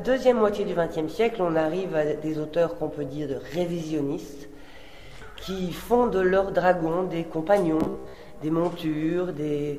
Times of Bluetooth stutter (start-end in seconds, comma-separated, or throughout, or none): 7.80-8.18